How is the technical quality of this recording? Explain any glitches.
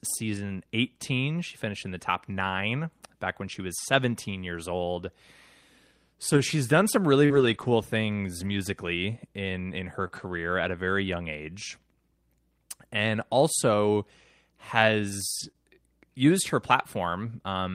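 The recording has repeated network-loss glitches in this speech clip, of two kinds.

Lost packet rebuilt from error correction occurs at 1.97–1.99, 6.33–6.39, 7.30–7.64, 8.40–8.53, 10.11–10.17 (between "in in her" and "at a very young") and 15.39–15.49 s. Each missing packet was replaced by a low-bitrate copy carried in the following packet, so nothing drops out. Those stretches, up to 180 ms long, sound rougher and noisier.

Short concealed packet loss comes at 7.25–7.31 s just after "she's done some", 10.08–10.11 s, and 15.51–15.56 s just before "used her". About 20–40 ms arrived too late, so the decoder extended the preceding sound and then blended back, giving a brief smear or wobble.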